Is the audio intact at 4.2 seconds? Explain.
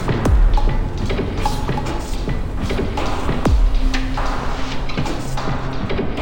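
No. At 4.2 seconds, as throughout the clip, the audio shows stereo read as mono: the left and right samples, which alternate in the file, are being read in sequence as one channel. Each moment therefore takes twice as many samples to play, so the sound runs at 0.5x speed and sits 12 semitones, a full octave, too low, with a fainter mirrored copy of the sound showing up in the upper half of the spectrum.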